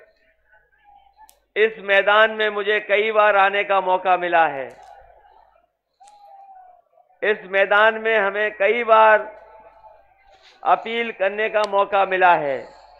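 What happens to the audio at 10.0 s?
You're in the middle of a run of clock slip clicks spanning 0.30 to 12.76 s: faint, regular ticks about every 0.4 s, each a single dropped or repeated sample. Likely two unsynced clocks drifting apart by around 70 ppm.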